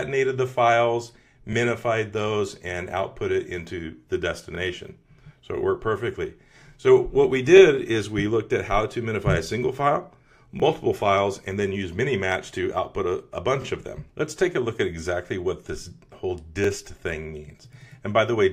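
Overlapping chunks produce a short stutter at 1.53–1.55, 4.55–4.57, 7.57–7.60, 10.60–10.62, 13.62–13.64 and 16.64–16.67 s, one every 3 s. At each join the next chunk starts about 23 ms early, so that slice of sound plays twice. Each join is heard as a brief click. A waveform shows a duplicated stretch with a discontinuity at the seam, and a spectrogram shows a thin vertical broadband line there.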